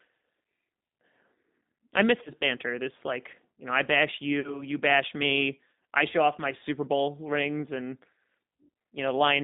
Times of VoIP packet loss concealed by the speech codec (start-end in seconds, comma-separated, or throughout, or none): 2.24-2.31, 4.40-4.63, 6.59-6.63